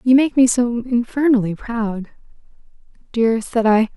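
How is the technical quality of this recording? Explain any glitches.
No glitches can be heard anywhere in the recording.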